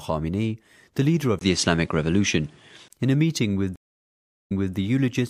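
At 1.39 s a gap of about 20 ms opens, and the sound comes back duller, with nothing above 11.4 kHz, a level shift of roughly 5 dB and a new noise floor around 40 dB under the signal. This is likely an input switched to a poorer device, a narrower-band microphone or headset path, until 2.90 s. A spectrogram shows the upper band sharply cut off across that span, and a faint, steady floor fills the gaps between sounds.

From 3.76 s a stream reconnect leaves 734 ms of dead air, a flat line in the waveform and a blank column on the spectrogram. When the connection returns, a fresh decoder starts, and playback resumes 264 ms earlier than where it broke, so that fragment is heard twice. Its first frame ramps up, visible as a short envelope fade-in before full level. The fault ends at 4.76 s.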